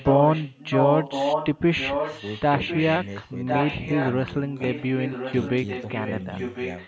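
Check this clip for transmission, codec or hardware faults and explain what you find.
One fault is present: echo leak, from 0.0 to 1.61 s, 1.77 to 4.34 s and 4.5 to 6.88 s. A copy of the speech returns 1.05 s late, about 5 dB below the original at first and weaker, about 10 dB below, in the last stretch. The likely cause is a far-end echo canceller failing to remove the loudspeaker sound its microphone picked up, so it was sent back.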